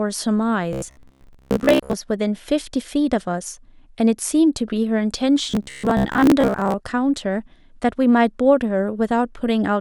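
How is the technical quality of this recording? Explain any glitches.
The recording has two stretches of robotic sound from repeated short buffers, from 0.73 to 1.94 s and from 5.51 to 6.74 s. Audio was likely arriving too seldom, so a segment of roughly 15 ms was replayed in place of missing material, for most of the first stretch and about half of the second. The speech becomes a rigid metallic buzz locked at 66.7 Hz.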